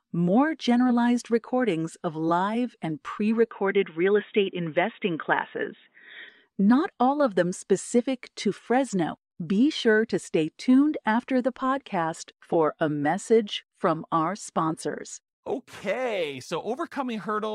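The input likely switched to a poorer device from 3.51 s to 6.29 s, right after "of live and pre". That path carries nothing above 3.8 kHz, so the speech turns dull and boxy, with a faint new background noise, at an unchanged level and with no gap at the switch.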